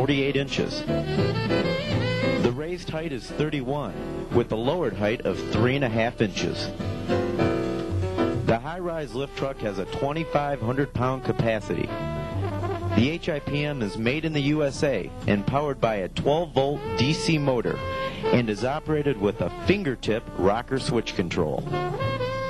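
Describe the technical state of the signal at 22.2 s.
At 22.2 s the signal is intact, with no dropout, distortion, glitch or other audible fault at that moment.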